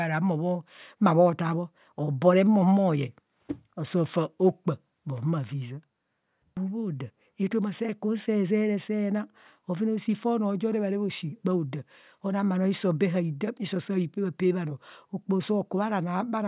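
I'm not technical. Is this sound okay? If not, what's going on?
Yes, this recording sounds fine. There is no point in it where something goes wrong, so there's nothing here for you to worry about.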